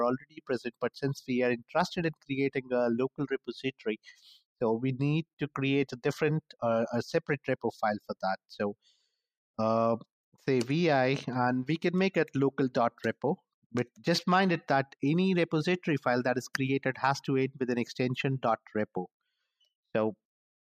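Between 0.18 and 0.5 s the sound sinks, dropping by as much as 18 dB over roughly a third of a second before recovering. This is sound cut by the noise suppressor: it mistook that stretch for background noise and attenuated it far more than its surroundings.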